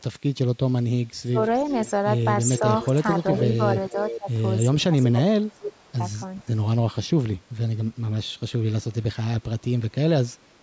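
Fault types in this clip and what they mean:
Speech suppressed in double talk: The talker's speech drops sharply in three places, 1.12 to 1.4 s, 4.18 to 4.3 s and 4.72 to 5.94 s, sinking by up to roughly 25 dB and affecting about 0.7 s in the longest stretch. This is likely an echo canceller turning everything down when both sides spoke at once, because it could not tell the local talker from loudspeaker echo.
Echo leak: A delayed copy of the speech returns about 419 ms behind the original, heard at 1.53 to 1.91 s, 2.57 to 3.5 s, 3.87 to 4.2 s and briefly at 6.36 to 6.44 s. It sits roughly 10 to 30 dB below the speech, loudest in the middle two stretches. This is likely loudspeaker sound that the far side's echo canceller failed to remove and sent back.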